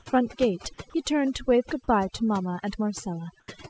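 Overdone noise removal runs through the whole speech clip. The suppressor cut individual frequency bands whenever they sat near its noise estimate, taking quiet parts of the voice with them. The background drops and breaks up into twinkling specks. On a spectrogram the floor shows as scattered isolated dots, and speech harmonics look patchy. Above 8 kHz there is an empty band left by the call codec.

From 0.90 to 0.94 s, 40 ms of audio is swapped for steady comfort noise, so about 20 ms of speech vanishes. The likely cause is sound dropped by the voice detector, which took the sound for background and stopped sending. The waveform shows a short flat, even stretch where speech energy should continue.

From 3.40 to 3.48 s, comfort noise takes the place of the background for 80 ms, likely because transmission paused when no speech was detected. The real background, about 37 dB below the loud parts, gives way to featureless hiss roughly 9 dB quieter. 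On the spectrogram this appears as a smooth, uniform band with a drop in level.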